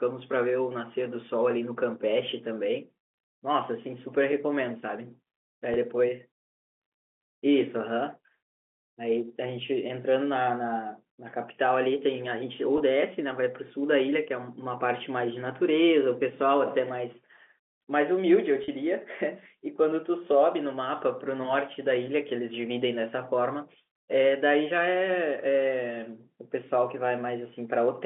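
At 5.74–5.76 s, 12.78–12.80 s and 18.64–18.68 s, packet loss with pitch repetition bridges each gap with a briefly held buzz rather than silence, fitting one, one and two lost 20 ms packets.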